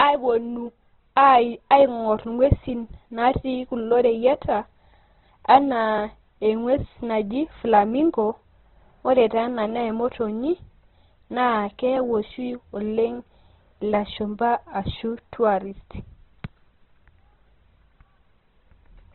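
From start to finish the speech carries heavy Opus compression damage, which likely comes from encoding at a very low rate, one that fits something near 12 kbps in the codec's music-style CELT mode. Starved of bits, the encoder keeps each band's energy but refills the detail with folded or noise-like content, so the voice sounds rough and grainy rather than swirly. Nothing survives above 4.2 kHz, which leaves it narrowband and muffled. A spectrogram shows a hard ceiling at 4.2 kHz and smeared, noisy texture inside the bands.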